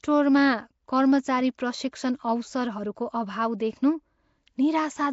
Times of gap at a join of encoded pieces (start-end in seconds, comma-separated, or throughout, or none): none